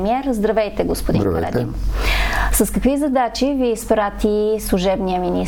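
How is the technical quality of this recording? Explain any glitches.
No glitches or technical faults can be heard here.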